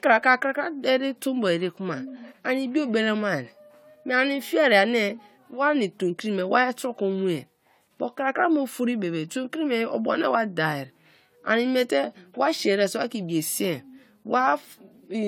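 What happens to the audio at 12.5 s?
At 12.5 s the speech sounds swirly, smeared and hollow, with blurred consonant attacks and nothing above 19.9 kHz. That is generation loss, present throughout the clip, likely from around four AAC-LC re-encodes near 96 kbit/s, each adding its own quantisation noise and spectral holes.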